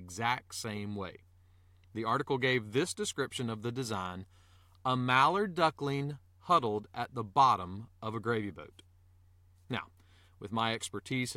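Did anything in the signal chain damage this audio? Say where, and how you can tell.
No, nothing in this speech recording stood out on listening as a sign of damage anywhere along the signal chain.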